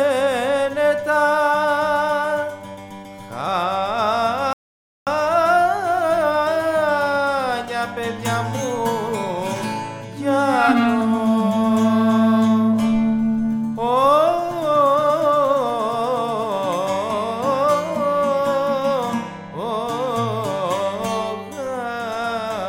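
At 4.53 s the sound drops out into silence and picks up again at 5.07 s. It's a rebuffering stall: playback ran dry waiting for more downloaded audio, paused, then carried on exactly where it left off. Nothing's missing, just about 0.54 s of dead air added.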